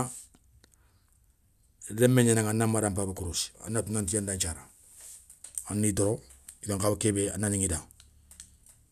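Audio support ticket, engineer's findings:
Listened through the whole speech recording and found nothing to flag, so no findings to log on this one.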